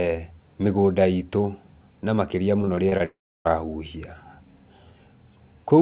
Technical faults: repeated packet loss (robotic sound); long network dropout

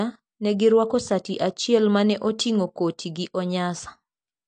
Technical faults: AAC compression

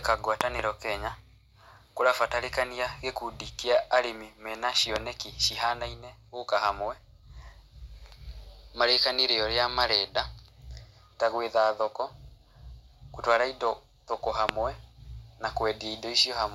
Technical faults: loud pop

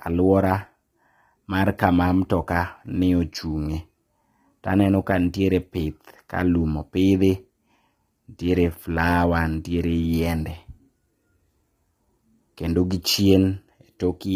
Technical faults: low-delay AAC compression

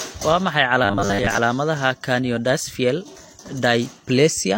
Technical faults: robotic sound from repeated short buffers

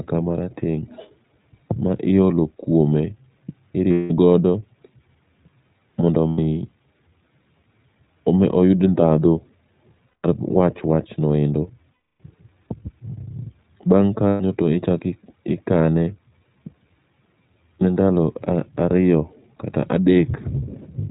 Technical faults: iLBC codec; lost iLBC frames

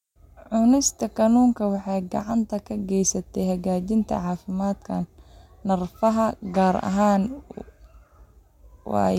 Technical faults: none

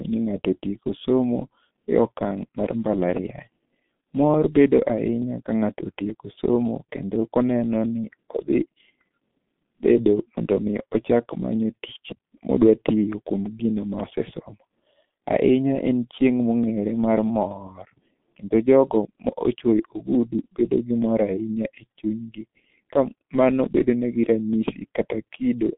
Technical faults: G.723.1 codec

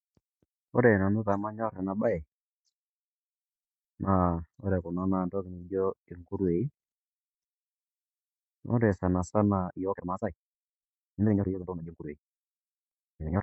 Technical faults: time-stretched section

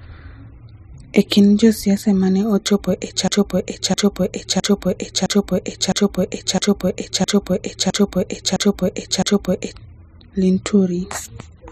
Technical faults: broken-record loop

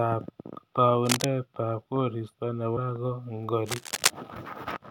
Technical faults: cable scratch noise; compressed frames skipped

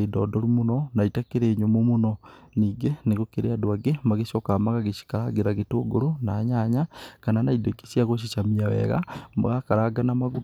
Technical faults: none

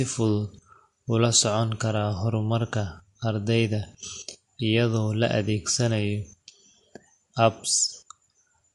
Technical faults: MP3 compression

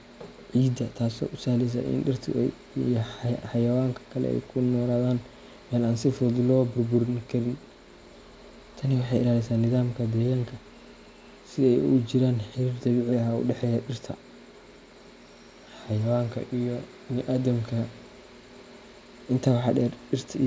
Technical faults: none

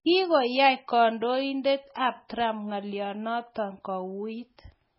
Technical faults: MP3 compression

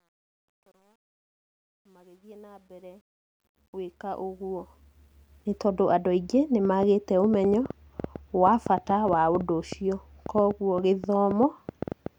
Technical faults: truncation distortion on a fade; train of clicks

